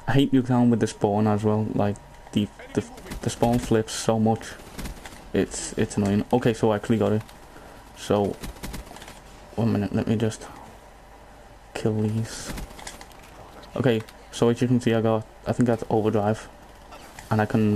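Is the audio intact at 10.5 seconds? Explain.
Yes, at 10.5 seconds the audio is intact, with no dropout, click, distortion or other fault at that moment.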